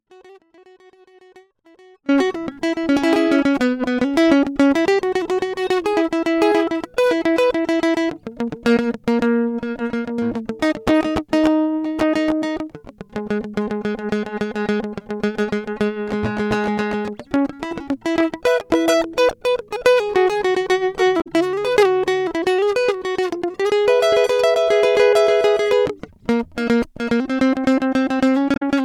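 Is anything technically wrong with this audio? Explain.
Yes. The music is already in an audio dropout to a faint residue when the clip begins, and it stays there until about 2.09 s. Only a faint trace of the music is left, roughly 30 dB below its normal level, which most likely means the signal was lost while the path after the break stayed live. At 2.09 s the full sound returns abruptly rather than fading in. On a waveform the opening looks like a thin sliver that jumps to full height, and a spectrogram shows a dim band that snaps to full brightness.

Two short bursts of damaged data in a compressed stream follow, from 21.17 to 21.27 s and from 28.51 to 28.62 s. Each time, the decoder misread corrupted frames, lost sync and hunted for the next valid frame header. The result is a brief chirp, squawk, click or short hole, each about 0.1 s long. A spectrogram shows these as narrow vertical disturbances that break the musical texture, and the waveform shows a glitch at each point.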